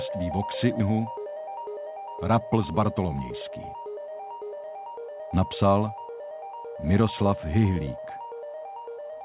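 At 0.80 to 0.82 s, a skip ahead: about a second of audio was dropped, and playback jumps forward with no gap, the two sides butted together. From 0.90 to 1.92 s, a jitter buffer speed-up: the overfull buffer trimmed short pitch-period slices, roughly 150 ms in all, so the audio runs at 112% speed with unchanged pitch and sounds hurried, all of it band-limited to 4 kHz by the call codec.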